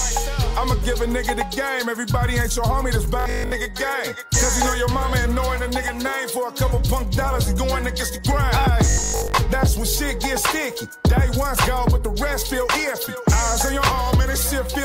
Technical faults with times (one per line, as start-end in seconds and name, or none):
3.20-3.52 robotic sound from repeated short buffers
8.90-9.38 robotic sound from repeated short buffers